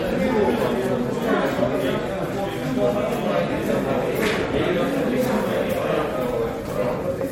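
Throughout, the audio sounds swirly, smeared and hollow, with blurred attacks and nothing above 16.5 kHz. This is likely generation loss from re-encoding about four times, consistent with 64 kbit/s MP3.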